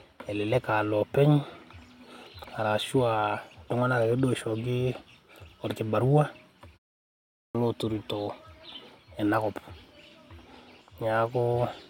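Clipped start after a pause at 7.15 s: after a 0.45 s pause, the output device went idle and needed time to wake, so the first 0.40 s of returning speech is swallowed. The sound bursts in abruptly at 7.55 s, missing its opening.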